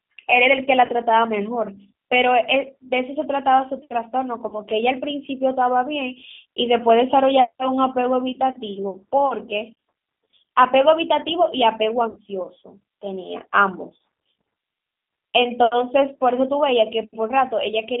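Speech, carried throughout by the G.729 codec. The band runs only from 200 Hz to 3.6 kHz, and the voice sounds plainly rough and synthetic. That fits G.729A at 8 kbit/s, which rebuilds each short frame from a filter, a pitch guess and a few pulses. VoIP packet loss concealed by the speech codec occurs at 0.86 to 0.91 s, 4.49 to 4.56 s, 12.10 to 12.19 s and 13.97 s. The decoder stretches its last sound into a buzzy tone or coloured noise that fades. About 30 ms is lost at most spots and 60 ms at 12.10 s, which points to two packets there.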